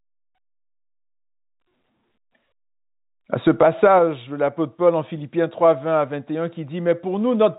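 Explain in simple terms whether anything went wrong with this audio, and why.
Nothing stood out as wrong on listening to this speech, which has the narrower, phone-call quality that G.711 telephone coding gives.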